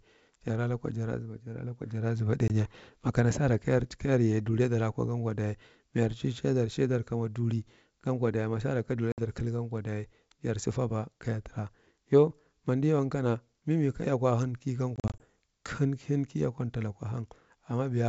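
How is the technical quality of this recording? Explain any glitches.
The recording has three moments of packet loss on an ADPCM call over wideband G.722 coding. The first is a hole of about 20 ms at 2.48 s, after "jara lukwa jara zaba" and before "makana sara kayar ta". The second is a 60 ms gap from 9.12 to 9.20 s, after "dayi masara ka duli" and before "kalgankwa duli jarsa fabwa". The third is a cluster from 14.96 to 15.25 s, where about 120 ms of short losses, the longest 40 ms, are scattered over roughly a quarter second. Each lost packet is replaced by silence, so the decoder's adaptive predictor and step size drift from the sender's. A plain dropout would simply resume cleanly. Here the sound returns slightly distorted, then settles within tens of milliseconds.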